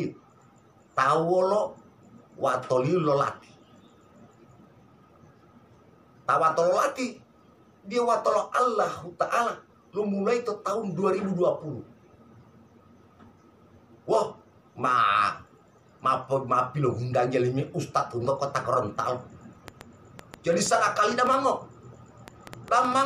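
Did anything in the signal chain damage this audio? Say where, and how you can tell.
Yes, there's a train of clicks from 19.68 to 22.94 s, around five per second, irregularly spaced and about 10 dB above the audio, likely interference pickup in the analogue wiring.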